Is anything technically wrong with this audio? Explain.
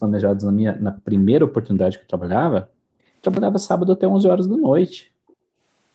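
Yes. At 0.75 to 0.79 s, 0.96 to 1.02 s and 5.28 to 5.34 s, faint delayed scraps of the speech surface, roughly 20, 30 and 40 dB below it. This is likely an echo leak: the far side's loudspeaker output reached its microphone, the echo canceller missed it, and it returned about 420 ms late.

From 4.82 to 4.95 s the room sound drops by about 40 dB for roughly 150 ms, then comes back. This is background gated by the echo canceller, which clamped the microphone while the loudspeaker played.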